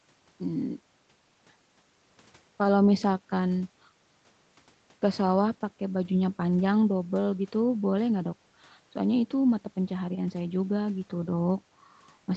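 Listening to this speech recording, nothing stood out as a technical problem, and the call microphone processing it passed through, with its bass roll-off and content ending around 8 kHz, is behaving as that path normally does.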